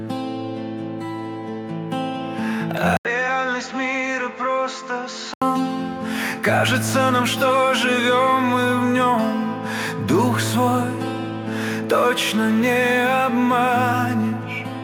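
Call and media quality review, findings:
Input likely switched to a poorer device, 2.97 to 5.42 s: 80 ms gap at switch, then band narrowed, level a few dB lower, faint new noise floor.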